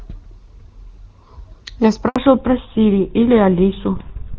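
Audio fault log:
2.08–2.16 s, handover gap: the call switched from one network to another and no speech frames came through during the move. The sound cuts off almost at once and stays silent for 80 ms until the new link picks up, and whatever was said in that stretch is gone.
2.16 s to end, fallback to narrowband: after the handover the call dropped from HD Voice to an older narrowband codec, which fits GSM full rate. Before the switch the wideband sound is clean, as from AMR-WB near its top rate. After it, nothing remains above 4 kHz, so the sound turns duller and rougher.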